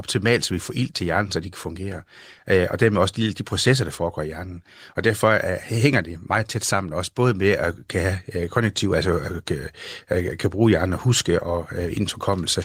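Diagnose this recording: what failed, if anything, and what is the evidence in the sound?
Nothing failed in this recording, and there is no evidence in the sound of a fault.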